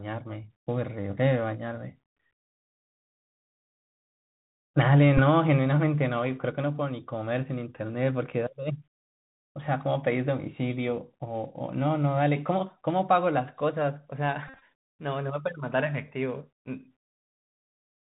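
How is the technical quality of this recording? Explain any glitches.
Quality's limited: it's a Bluetooth headset recording, so the whole thing is narrowband and a bit rough, with two dropout glitches on top.

The Bluetooth CVSD headset codec runs throughout, and its damage is plainly audible. This one-bit, step-adapting scheme, which fits a 64 kbps link, passes nothing above 4 kHz. The result is muffled speech, scratchy s sounds, and a granular hiss sitting underneath.

There are also two Bluetooth headset packet repeat events, where lost packets got filled by re-decoding the previous one. At 5.18 to 5.20 s it's brief, about 11 ms, which points to three packets, so it passes quickly. At 14.48 to 14.62 s, 105 ms goes missing across roughly 140 ms, with the longest run around 50 ms. That stretch buzzes near 267 Hz from the 3.75 ms repetition.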